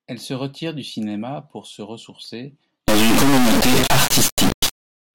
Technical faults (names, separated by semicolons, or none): integer read as float